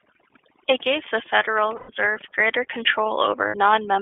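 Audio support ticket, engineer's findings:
Overdone noise removal, throughout the speech. Background pulled down and broken up into twinkling specks. The suppressor is set too aggressively, switching off single bands near its noise estimate and taking quiet speech with them. Unlike a gate, it acts per band, so there is no whole-signal on/off.

iLBC codec, throughout. Band limited to 200 Hz to 3.5 kHz, with a plainly audible rough, synthetic edge. This narrowband VoIP codec codes each frame independently, and the sound fits the 30 ms mode at 13.33 kbps. It differs from a plain low-pass because the roughness sits in the voice itself, beyond the missing top end.

Lost iLBC frames at 1.77 to 1.90 s (120 ms) and 3.48 to 3.55 s (60 ms). Each gap is a held, buzzy, vowel-like fill rather than silence, as the decoder repeats the last pitch cycle mixed with noise. The lengths fit four and two 30 ms frames. 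Recovery is immediate, unlike codecs that carry state between frames.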